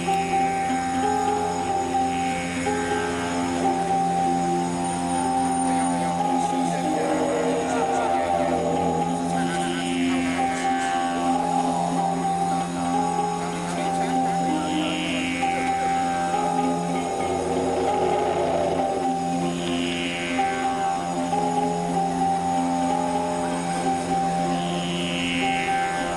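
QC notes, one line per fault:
Throughout, doubled audio track: every sound is followed by a second, equally loud copy about a third of a second later, dry and full-band with no decay, giving a flat slapback. Likely the same signal captured twice, once through a slower path.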